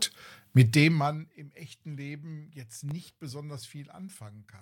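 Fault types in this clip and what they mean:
Processor overload crackle: a short gritty crackle from 2.81 to 3.16 s, where the processor misses several sub-millisecond buffer deadlines and leaves tiny silent gaps.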